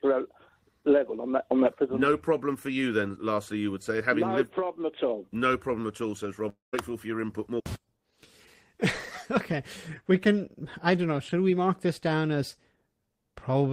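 At 6.49 s a fading buzz smears the last sound, then about 150 ms of near silence follows. Audio resumes at 6.75 s minus some 240 ms, likely a long network dropout. Spectrograms show decaying horizontal streaks, then a blank gap in the waveform.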